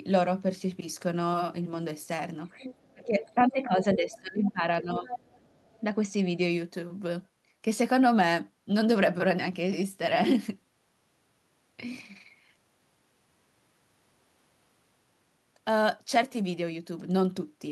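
Speech recording with an echo problem packed into the first six seconds. The far end's voice is leaking through in scraps at 2.59–2.91, 3.21–3.50, 4.13–4.19, 4.45–4.51 and 5.08–5.80 s, sitting roughly 15 to 25 dB under the talker. It's likely the device's loudspeaker output getting back into the mic, with the echo canceller only partly removing it. Overlapping that, there's speech suppressed in double talk from 2.93 to 5.11 s. For around a second and a half in total, the talker's level dips, bottoming out at roughly 20 dB down. There's a second, milder dip of a few dB at 5.86–6.16 s. That's likely the canceller failing to tell the near talker from the echo while both were active and clamping down on everything at once.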